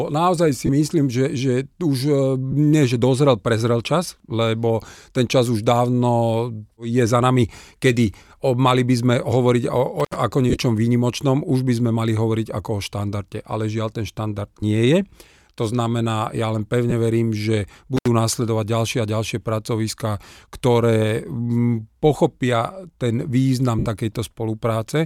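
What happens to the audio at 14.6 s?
At 14.60 to 14.63 s, lost LE Audio frames cause a brief gap of about 22.5 ms, which fits three lost frames. The LC3 decoder fills it by repeating the last spectrum with randomised signs, so the speech briefly smears into noise instead of dropping to silence or clicking as a plain dropout would.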